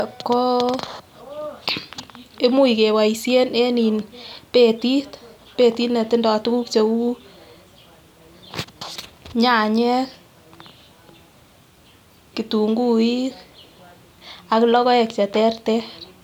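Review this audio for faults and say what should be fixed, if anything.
Nothing to fix: no faults are audible anywhere in the speech, so no corrective action is needed.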